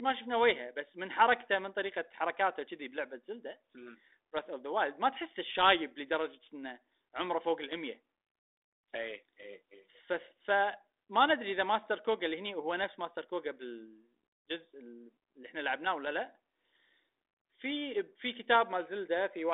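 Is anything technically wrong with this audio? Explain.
No, nothing here points to a technical fault. The speech reaches us through a G.726 ADPCM telephone path at 32 kbit/s, the rate used by DECT cordless phones, so the sound sits in the usual line band of about 300 Hz to 3.7 kHz.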